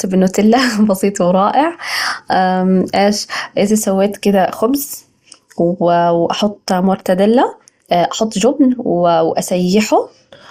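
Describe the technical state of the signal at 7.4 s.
At 7.4 s the speech is passing through what is likely MP2 compression, and it has been throughout the clip. Layer II coding divides the signal into 32 equal sub-bands and shares out a tight bit budget, so upper bands drop out and return from moment to moment while the remaining ones are coarsely quantised. The damage is plainly audible: a dulled top end with a gurgling, granular texture, which fits a rate of around 80 kbps.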